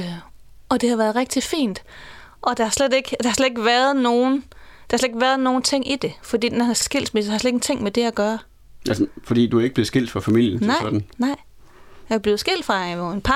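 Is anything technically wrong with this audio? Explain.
Yes. This speech has repeated frames at 2.03 s and 6.81 s. Each time, a 52 ms block of compressed audio, which fits a pair of frames, plays twice, giving a brief stutter and lengthening the clip. Unlike a dropout, nothing goes missing; a fragment is doubled.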